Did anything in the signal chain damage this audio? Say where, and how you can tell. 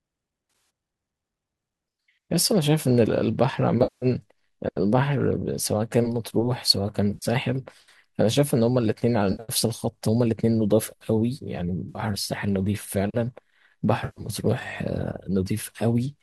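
Yes. The damage sits at the network stage: AAC frames went missing in transit six times, at 0.50–0.70, 3.83–4.06, 7.14–7.26, 9.32–9.43, 11.89–12.01 and 14.05–14.29 s, totalling between 70 and 190 ms each. The decoder papers over each gap by reusing the last good spectrum with scrambled phase, so the speech briefly turns smeared and noisy rather than dropping out. The short, closely grouped holes, with the longest run around 50 to 70 ms, fit the roughly 10 ms frames of a low-delay AAC stream, likely AAC-ELD.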